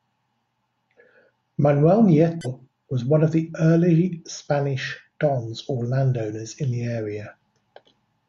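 At about 2.41 to 2.47 s the speech is interrupted by a short blip, which is damaged data in the compressed stream. A stretch of corrupted bytes trips up the decoder, which misreads or drops the frames for those few hundredths of a second before it finds the next good frame header and locks back on.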